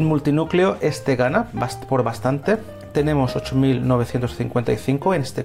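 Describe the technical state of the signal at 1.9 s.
At 1.9 s the signal is intact, with no audible technical fault at that moment.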